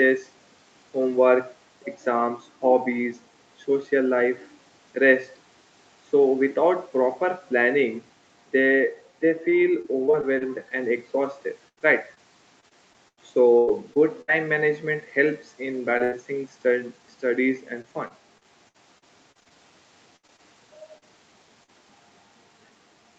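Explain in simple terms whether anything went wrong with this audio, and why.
Repeated packet loss (robotic sound) occurs at 9.49 to 10.72 s, 11.68 to 14.30 s, 17.82 to 19.52 s, and 20.16 to 21.04 s. Bits of the call kept going missing and were patched over. The speech turns choppy, with pieces missing.

Short concealed packet loss happens at 15.98 to 16.02 s and 21.64 to 21.70 s. A tiny piece vanished and was filled in. You hear a brief smear or wobble.

A burst of packet loss follows at 16.04 to 16.14 s. About 80 ms went missing at once. The last sound is stretched and fades, then speech jumps ahead.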